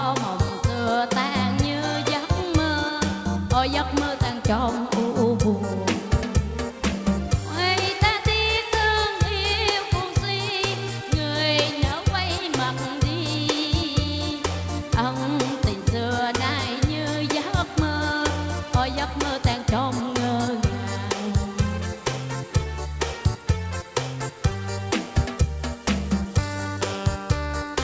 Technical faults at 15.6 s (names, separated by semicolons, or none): none